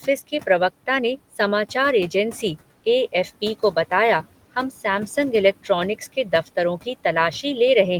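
A speech recording with noise suppressor artifacts running through the whole clip: the room noise, sitting about 18 dB below the talker, is pulled down by about 17 dB in the gaps and then surges back under each phrase. Unlike a noise gate, which snaps fully open or shut, the suppression here works band by band, so the background pumps rather than cutting cleanly on and off.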